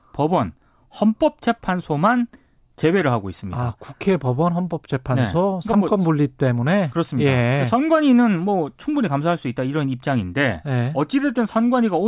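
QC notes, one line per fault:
Nothing to flag here; the speech runs along without a single problem worth noting.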